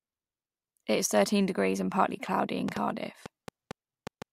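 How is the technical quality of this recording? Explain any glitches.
The recording has one clear glitch, a train of clicks. From 2.69 to 4.23 s, just after "and partly cloudy in", about seven sharp, near-identical pops arrive unevenly, roughly 3.9 per second, peaking around 10 dB above the speech. They are likely interference from nearby equipment or a faulty connection or power supply. Their matching shape sets them apart from random crackle.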